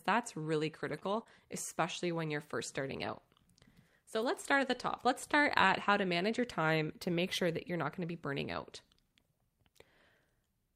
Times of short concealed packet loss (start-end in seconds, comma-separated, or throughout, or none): 0.99-1.27